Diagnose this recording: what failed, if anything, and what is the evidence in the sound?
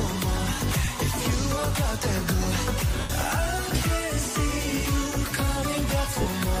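The Bluetooth link dropped LE Audio frames, a failure at the wireless transport and codec stage, three times: near 0.85 s for about 30 ms, from 3.00 to 3.10 s for about 90 ms, and from 6.22 to 6.26 s for about 45 ms. The gap lengths fit 7.5 ms LC3 frames. For each missing frame the LC3 decoder repeated the last spectrum with randomised signs, so tonal content turns into a brief noisy smear, and the longer 3.0 s gap fades toward silence.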